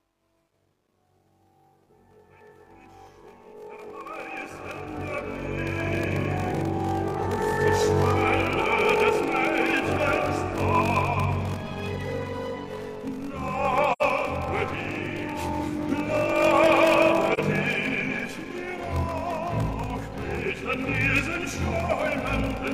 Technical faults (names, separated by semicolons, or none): block size mismatch (padded); truncation distortion on a fade; AAC frame loss with muting